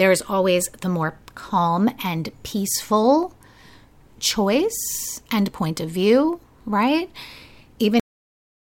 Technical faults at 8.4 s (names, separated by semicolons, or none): cut-off end